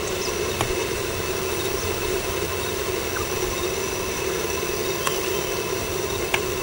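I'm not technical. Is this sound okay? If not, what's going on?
Yes, nothing wrong can be heard anywhere in this audio.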